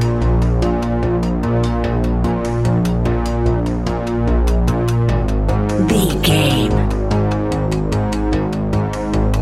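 No technical faults can be heard anywhere in the recording.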